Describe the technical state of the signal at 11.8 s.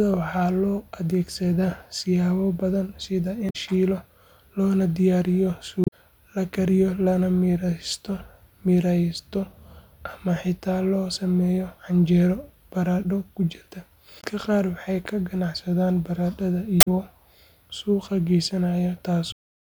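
At 11.8 s the speech signal is intact, with no audible fault at that moment.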